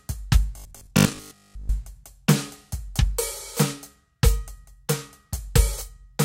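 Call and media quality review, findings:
Robotic sound from repeated short buffers, 0.57–1.69 s: rigid 50 Hz buzz, likely underrun looping a ~20 ms buffer. Spectrogram shows 50 Hz harmonic comb; waveform shows identical repeating segments.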